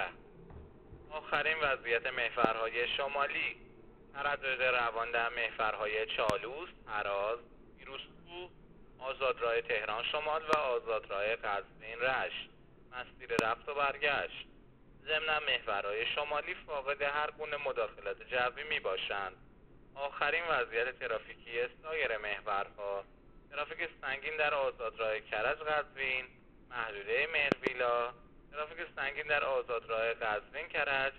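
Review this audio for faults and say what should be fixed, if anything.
A sudden voltage step, likely from a switch, plug or driver glitch, produces a loud pop about 25 dB above the sound at 2.45–2.47, 6.30–6.32, 10.53–10.55 and 13.39–13.41 s, and a double pop at 27.52–27.69 s, with the audio continuing underneath. Securing connections, grounding against static and muting the output while switching would prevent these pops.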